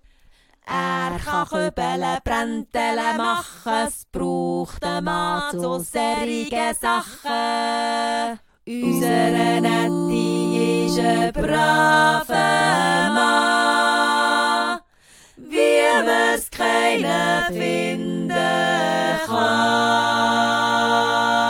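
No faults detected anywhere in the recording.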